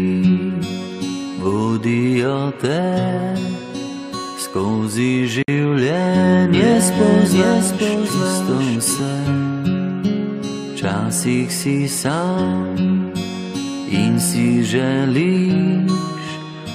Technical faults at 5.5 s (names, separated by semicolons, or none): gap at a join of encoded pieces